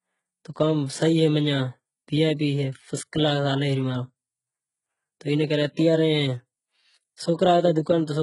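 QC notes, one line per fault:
throughout HE-AAC compression. Nothing remains above 11.1 kHz, and the treble below that sounds copied upward rather than captured. S sounds turn gritty and lispy, and the damage is heavy. The likely cause is HE-AAC band replication at a bitrate near 12 kbps.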